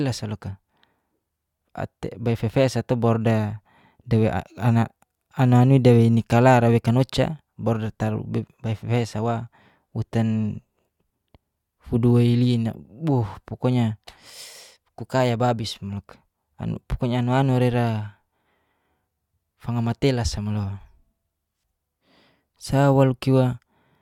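Listening to the speech recording, nothing stood out as a technical problem at any point.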